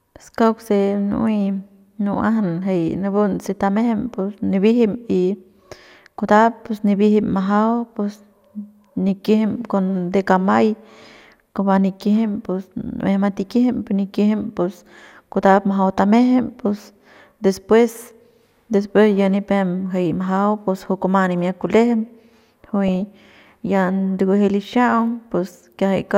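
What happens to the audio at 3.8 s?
At 3.76 s, weak DAB reception lets bit errors slip past error correction into the MP2 data, corrupting samples. The result is DAB burbling: brief blips of noise in single sub-bands over the speech.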